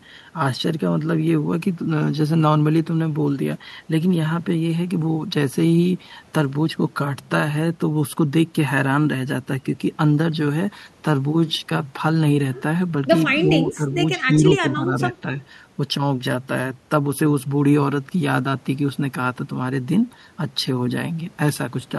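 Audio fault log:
13.42–13.47 s, 13.65–13.87 s, 14.28–15.02 s: speech suppressed in double talk. The speech dips briefly, by about 5 dB and then around 10 dB, likely from an echo canceller ducking the near talker while the far side also spoke. The waveform shows notched envelope sags, and the spectrogram shows faded bands.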